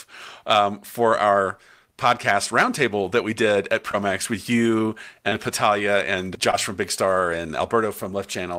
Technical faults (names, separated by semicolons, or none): short concealed packet loss